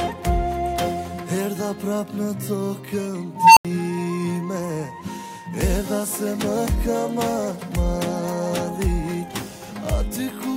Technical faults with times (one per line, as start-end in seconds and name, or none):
3.36-3.65 unstable filter